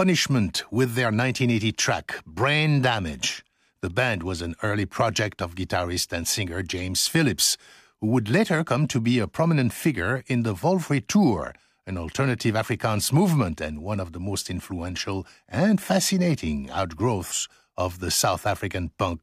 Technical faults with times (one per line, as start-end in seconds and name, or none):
none